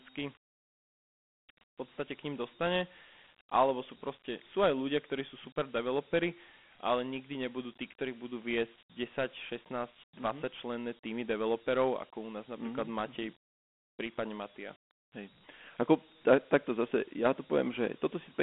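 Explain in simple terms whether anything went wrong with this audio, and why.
Yes, something went wrong. The speech was stored with Dialogic VOX ADPCM, a phone-system format that keeps only a rough sketch of each sound wave. From start to finish the sound is thin and telephone-like, with nothing above 3.9 kHz, and a gritty hiss trails the speech.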